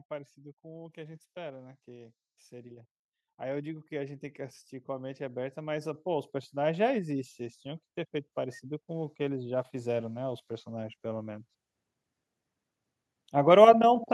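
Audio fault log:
0.61–4.29 s and 4.85–11.48 s, automatic gain rising: the level climbs by about 6 dB, then about 12 dB, as the gain control lifts a quiet input. Background noise swells along with the speech, which separates it from a talker simply getting louder.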